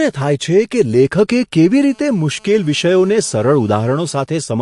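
A speech recording with a watery, swirly texture throughout, s sounds turning metallic and smeared, and nothing above 11.3 kHz. That points to a likely cause of heavy MP3 compression at a low bitrate, near 52 kbps, where the encoder cuts the treble and drops weak frequency components from frame to frame. From 1.88 s to 4.24 s a hard, raspy buzz sits steadily under the speech at about 32 dB below it. This is GSM phone buzz: a 2G phone on a call transmits in bursts 217 times a second, and the audio circuitry rectifies those radio pulses into a harmonic-rich 217 Hz rasp unrelated to the speech.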